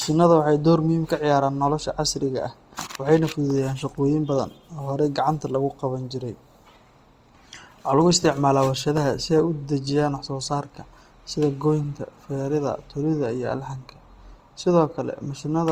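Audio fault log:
throughout: plainly audible Opus compression, likely a music-mode encode fitting about 24 kbps; starved bands are folded or noise-filled, making speech grainy and rough.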